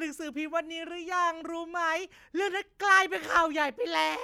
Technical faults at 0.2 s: none

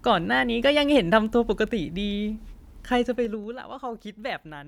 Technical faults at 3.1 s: zipper noise

